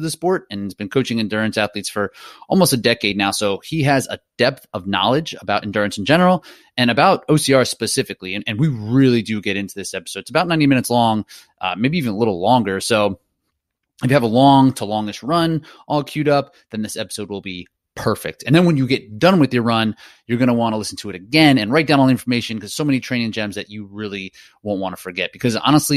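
A short stretch of recorded speech, and listening through it there's nothing technically wrong to point to anywhere along the way.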